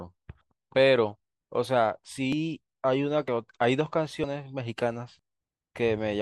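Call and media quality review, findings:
Audio missing between chunks: short skips at 2.33, 3.28, 4.24 and 5.19 s, each around 40 ms gone, butt-joined. Likely chunked recorder or processor dropping audio at each 1 s boundary.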